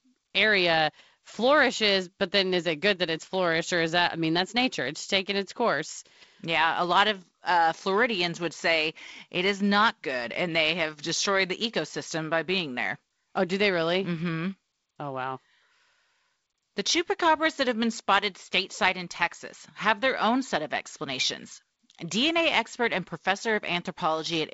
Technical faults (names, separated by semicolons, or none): none